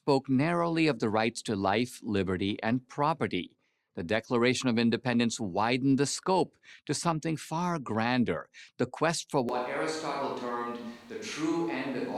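A speech recording in which the close microphone likely drops out at 9.49 s, after "grander the quest for", forcing a switch to a distant microphone. From there to the end the sound turns suddenly roomy, hollow and thin, about 5 dB quieter, with room noise around 25 dB below it.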